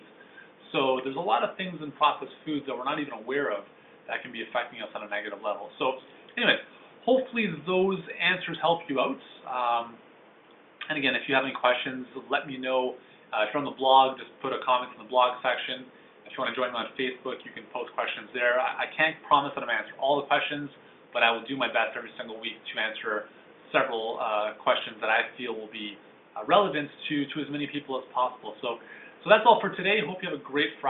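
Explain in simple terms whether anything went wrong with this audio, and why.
Nothing went wrong here: no dropouts, glitches or other technical faults show up anywhere in the audio.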